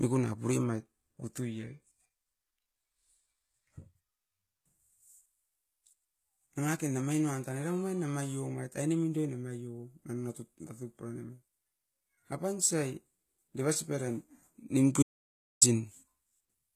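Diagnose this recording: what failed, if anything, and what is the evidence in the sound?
The codec stage is at fault: the speech was likely encoded as HE-AAC at a low rate, which fits roughly 20 kbps. Treble above the coded core is synthesised by spectral band replication, so sibilants sound gritty and metallic, and nothing remains above 14.9 kHz.

At the input stage the signal was likely lost from 15.03 to 15.62 s, about 0.59 s, while the recorder kept writing silence. The speech cuts off into complete silence with no room tone, then resumes abruptly in mid-flow, and whatever was said in that gap is gone.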